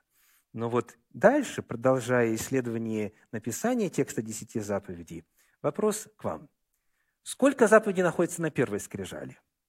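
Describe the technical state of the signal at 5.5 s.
At 5.5 s the speech signal is intact, with no technical fault present at that moment.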